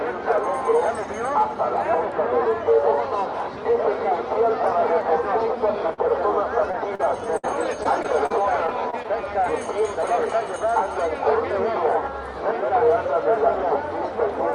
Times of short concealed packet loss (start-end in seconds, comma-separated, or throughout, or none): 5.93-6.00, 6.72-7.01